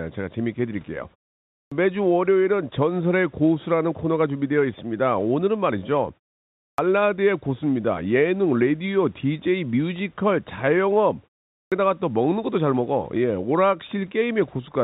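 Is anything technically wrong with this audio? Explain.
Yes. There is a clipped start after a pause at 1.61 s, 6.67 s and 11.60 s. Each time, about 105 to 118 ms is missing after a pause of roughly half a second. The output device seems to drop into an idle state during the gap and must wake or relock before it plays again, so the opening of the next phrase is cut and the sound begins abruptly out of silence. This is different from muted pauses, where the background also fades out but the first sounds of the next phrase arrive intact. The narrow band, with nothing above 4 kHz, comes from the call codec, which fits G.711 mu-law.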